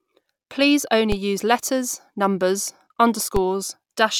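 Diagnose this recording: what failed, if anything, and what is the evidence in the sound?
A DC step at the converter or analogue input stage occurs twice in this speech, at 1.12 s, just before "use letters numbers", and again at 3.37 s. Each time the waveform's zero line jumps by about -11 dBFS, heard as a low thump that then fades as a 20 Hz high-pass pulls the offset back toward zero. It differs from a dropout or digital click because the speech carries on intact through each step.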